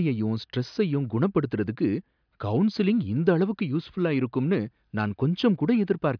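Nothing stood out on listening to this speech recording.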